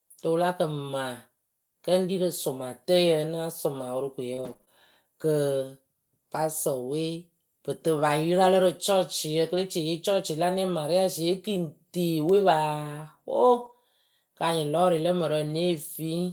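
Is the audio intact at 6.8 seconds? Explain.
Yes, the speech at 6.8 seconds plays through intact, with no dropout, click, distortion or other fault at that moment.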